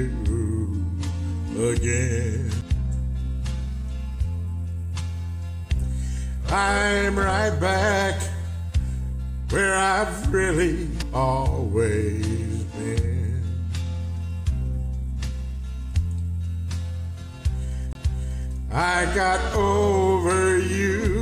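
The audio has three CD skips: brief ticks at 2.61 s and 11.02 s and a longer dropout from 17.93 to 17.95 s, each jumping the sound to a different point. The laser lost its track and landed on another turn of the spiral. On a waveform, each skip is a near-silent gap with an abrupt discontinuity. On a spectrogram, it is a thin vertical broadband line.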